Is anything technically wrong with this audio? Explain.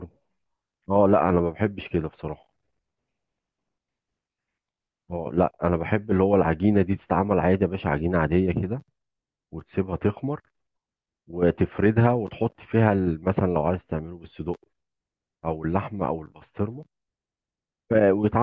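No, nothing technically wrong can be heard here.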